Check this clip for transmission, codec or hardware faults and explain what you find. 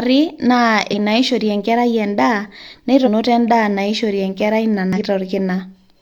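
The speech has three short codec glitches, all of one kind. Damaged data in a compressed stream occurs at 0.89–0.94 s, 3.02–3.08 s and 4.93–4.98 s. Each time, a run of corrupted bytes in the encoded stream makes the decoder misread or reject the affected frames and lose sync until it finds a valid frame header again. That brief breakdown comes through as a sudden chirp, squawk, click or short hole about 60 ms long, cutting across the speech.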